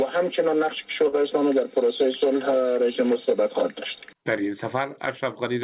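A short stall from a late packet occurs at 1.08 to 1.15 s. A packet arrived late, the jitter buffer ran dry, and the receiver held the last sound for about 43 ms until the packet turned up, then resumed exactly where it had stopped. Nothing is lost, but the sound drags briefly, and everything after it plays about 43 ms later. The audio came over a call path with nothing above 4 kHz, which fits G.711 A-law at 64 kbps.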